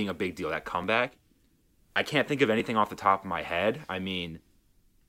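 A likely dropped buffer (overrun), where a few milliseconds of speech are lost and the edges spliced directly, causes jumps in the sound at 0.84 s, at 2.60 s after "I can't think of", and at 3.76 s after "the top of my".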